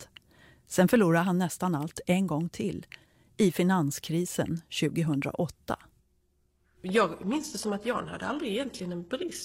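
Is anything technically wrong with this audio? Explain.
Yes. From 6.88 s to the end, the speech switches suddenly, without any gap, to an adaptive stream at a lower bitrate: nothing above 12.3 kHz. This fits a drop to roughly 16 kbit/s HE-AAC, unlike a dropout.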